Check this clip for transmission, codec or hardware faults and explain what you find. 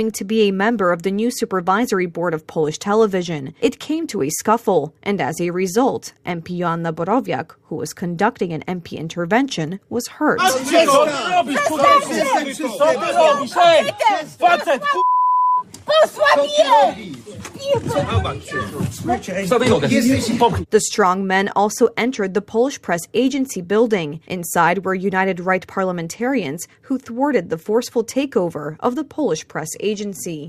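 No transmission, codec or hardware faults can be heard anywhere in the clip. The audio runs without any break, glitch or disturbance that would point to a problem in the chain.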